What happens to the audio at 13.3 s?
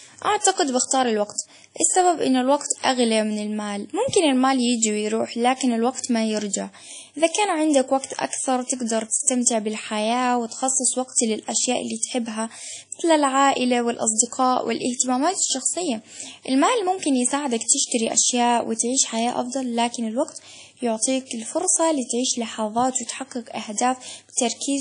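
The speech around 13.3 s sounds ringing and washy, with a hiss that breathes with the signal and nothing above 10.1 kHz. This plainly audible damage runs through the whole clip. The likely cause is WMA compression at a low bitrate, fitting about 32 kbps, where long transform blocks smear quantisation noise over tens of milliseconds.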